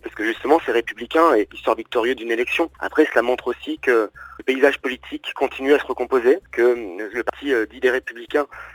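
Audio missing between chunks shows up at 1.50 s, 4.40 s and 7.30 s as three abrupt skips, each dropping about a tenth of a second, with the material on either side butted together and no gap of silence. The cause is likely a recorder or processor working in 3-second blocks and losing a short slice each time it closes one block and starts the next, which explains the steady spacing of just under 3 seconds.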